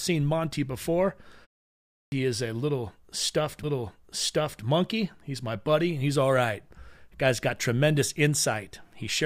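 Clipped start after a pause, at 1.78 s: after a pause of about 0.4 s, the output device appears to have dropped into a low-power state and needed time to wake and lock on again. The first 340 ms of the next phrase, running to 2.12 s, never reaches the listener. The speech therefore bursts out of silence mid-sound, missing its opening consonant or syllable, so the phrase begins with a hard, unnatural edge instead of a clean onset.

Stream segment repeated, from 3.63 s to 4.63 s: the player fetched or queued the same one-second segment of the stream twice. The speech jumps back and replays that full second, adding 1.0 s to the running time. At the join there is a small audible blip, and that second of speech is heard again before the speech continues.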